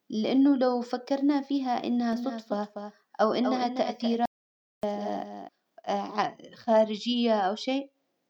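A doubled audio track runs from 2.13 s to 5.49 s, starting right after "لو فكرنا فيها إنها". A second full-band copy of the speech trails the original by roughly 0.3 s, about 10 dB quieter, giving an echo with no decay or room colour. It appears and disappears abruptly at those edges. The likely cause is the same signal reaching the mix twice, once through a slower path.

An audio dropout to silence follows from 4.26 s to 4.83 s, inside the doubled stretch. For 0.58 s the speech is replaced by silence, with no room tone at all, and it cuts out and returns mid-flow. Whatever was spoken in that gap is lost. This points to the input signal briefly vanishing, likely from a disconnected device or failed link, while the recorder kept writing silence.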